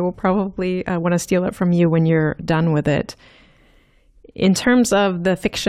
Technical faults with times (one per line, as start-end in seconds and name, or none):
none